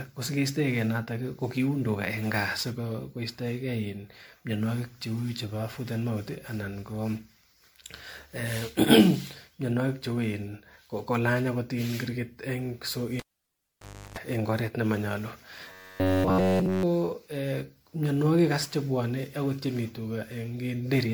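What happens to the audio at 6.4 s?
At 6.4 s, as across the whole clip, the speech shows generation loss: swirly, hollow, smeared, with blurred attacks, likely from about seven successive MP3 re-encodes.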